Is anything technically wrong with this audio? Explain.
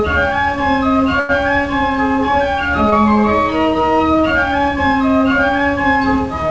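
Yes. At 1.20 to 1.31 s and 2.90 to 2.94 s the sound briefly holds and drags, with a faint buzz or dip, before resuming. These are short stalls from a late packet: the jitter buffer emptied, so the receiver stretched the last audio by about 91 ms and 19 ms until the packet arrived. Nothing is lost. The band-limited sound, with nothing above 8 kHz, points to the call's G.722 codec at 64 kbps.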